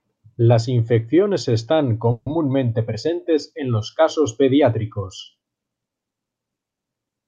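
At 2.11 s the speech stops moving and the last sound hangs on as a fading buzz for about 150 ms, dropping to silence for about 30 ms before the talker resumes at 2.33 s exactly where they left off, with nothing lost. This is a call audio freeze. The likely cause is packets held up in transit, so the jitter buffer ran dry and the receiver stretched the final sound until delivery resumed, pushing everything after it about 150 ms later.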